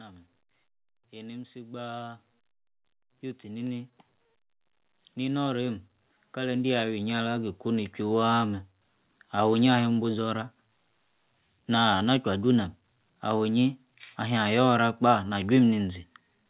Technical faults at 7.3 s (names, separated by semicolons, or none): automatic gain rising